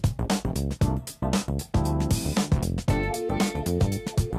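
Nothing goes wrong at any point in this audio; there's simply no technical fault to pick out from beginning to end.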